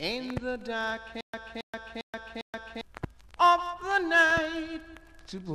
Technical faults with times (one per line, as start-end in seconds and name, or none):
1.21-2.81 stutter with silent gaps